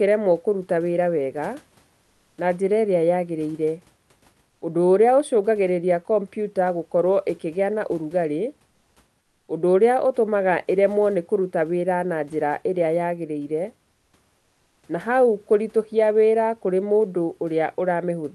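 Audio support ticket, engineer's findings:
Comfort noise in place of the background in speech pauses at 4.49–4.61, 8.71–8.95, 9.21–9.47, 13.91–14.13 and 14.37–14.83 s, 0.12 to 0.46 s each. Room noise, about 46–50 dB below the loudest passages, turns into a smooth, featureless hiss with level shifts of about +1 to −3 dB. Likely Opus DTX: sender stops transmitting in silence, receiver synthesises spectrally shaped noise until speech resumes. Call path audible as a top end stopping near 12 kHz.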